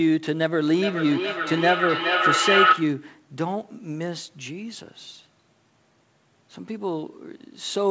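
Feedback howl, 0.76 to 3.12 s: the loudspeaker-microphone loop gains level on every pass, so a tone near 1.5 kHz swells and pulses roughly every 0.4 s.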